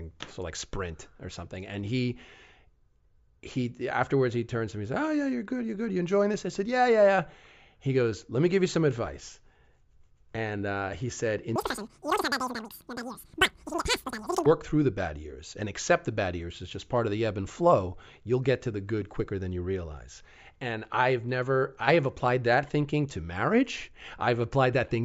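Wrong sample rate from 11.56 to 14.46 s, after "and uh he said": the audio is played much faster than it was captured, without conversion, so it runs 2.76 times too fast and about 17.6 semitones high, a squeaky rush consistent with 16 kHz audio played at 44.1 kHz, until "through the bad years".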